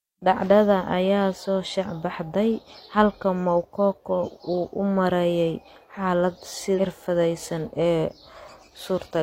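Damaged data in a compressed stream appears from 6.74 to 6.80 s, a brief glitch of about 60 ms in the speech. At that point the encoded bitstream carries corrupted bytes, so the decoder cannot parse the affected frames correctly. It produces garbage output or drops them while it hunts for the next valid frame header and regains sync. The result is a short glitch that breaks the flow of the audio before normal decoding resumes.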